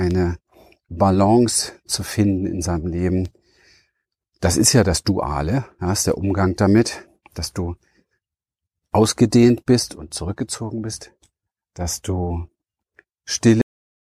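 At 13.62 s the speech just stops dead, a clear cut-off end. Whatever was being said at that moment is chopped off partway through, and the audio drops straight to digital silence for the last 0.39 s or so, with no natural decay or room tail at all. What went wrong is that the final chunk of audio never got written out or played, so the recording ends in the middle of a sound instead of finishing it.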